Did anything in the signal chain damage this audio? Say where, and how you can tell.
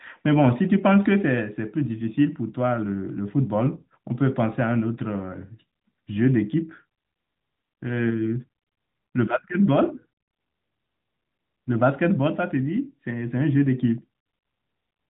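No, nothing in the chain damaged this speech; the narrowband mobile codec at 12.2 kbps is audibly present as a ceiling near 4 kHz, which is that codec's normal behaviour rather than a fault.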